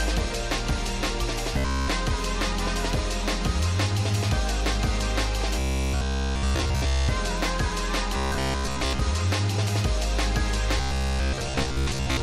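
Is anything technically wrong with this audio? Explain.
Yes. Robotic sound from repeated short buffers at 1.54–1.88 s, 5.59–7.09 s, 8.17–9.02 s and 10.78–12.22 s, likely from audio arriving too seldom so a 15 ms slice is looped. This imposes a rigid 66.8 Hz metallic buzz, covering all of the first two stretches and most of the last two. It shows as identical repeating cycles in the waveform and evenly spaced 66.8 Hz harmonic lines on a spectrogram.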